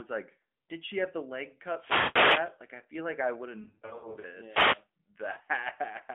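From 1.72 to 2.59 s the wireless microphone's radio signal fades as reflections cancel, and receiver noise rises into a wireless microphone noise hit, a swish of static over the speech. Inside it, from 1.98 to 2.18 s, AMR frames fail their checks and the decoder stretches the last good sound for 180 ms, so it drags and sinks toward silence. The narrow telephone band, which fits AMR narrowband at 12.2 kbps, carries it all.

From 3.62 to 4.25 s, scattered lost AMR speech frames remove 380 ms over 600 ms, in runs no longer than 80 ms, giving a stuttering warble with weak, rough recoveries. A second static burst from the microphone fade follows from 4.44 to 4.87 s. From 5.32 to 5.49 s, 80 ms of frames drop in runs up to 40 ms, causing brief dips and wobbles.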